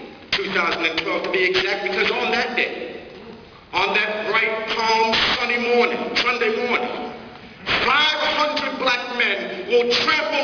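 Aliasing runs throughout: energy above 5.5 kHz folds back as loud, gritty, metallic tones, which fits unfiltered resampling to 11 kHz, crowding the band edge.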